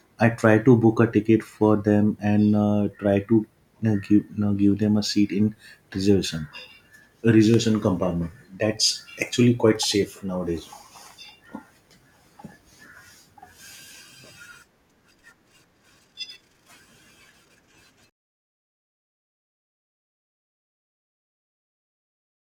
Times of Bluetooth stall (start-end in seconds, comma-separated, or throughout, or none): none